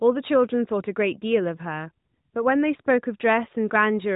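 No technical faults occur in the speech, which comes through the AMR narrowband mobile codec at 12.2 kbps as an ordinary mobile call would, with only light codec shaping and nothing above 3.8 kHz.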